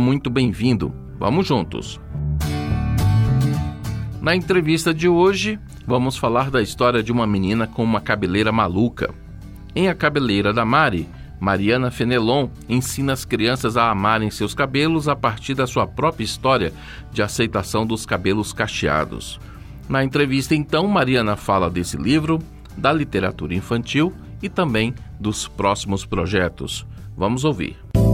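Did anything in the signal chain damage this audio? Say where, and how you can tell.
No, nothing in the chain audibly damages this audio, and no stage shows anything worth flagging.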